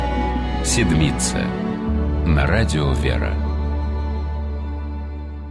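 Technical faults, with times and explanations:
No technical faults detected in the clip.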